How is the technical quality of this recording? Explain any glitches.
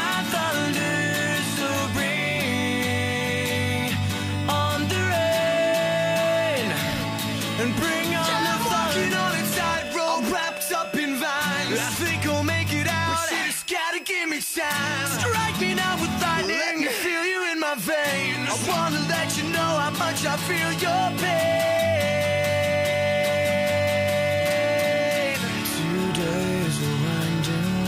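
A high, thin whistle sits under the sound from start to finish, which is the main technical flaw. It is a switching supply whistle: a tone wandering narrowly between about 2.56 and 2.61 kHz, roughly 20 dB below the programme. A switching power supply near the recording chain is cycling at an audible rate, or beating against another supply, and that electrical ripple leaks into the audio. The small pitch drift reflects the supply's load shifting as it runs.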